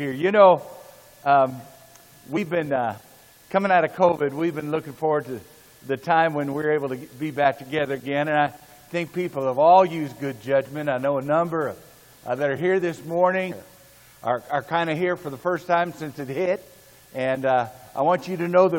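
Damaged data in a compressed stream shows up at 2.33 to 2.38 s as a brief glitch lasting about 40 ms, where the decoder misreads corrupted frames and resynchronises on the next header.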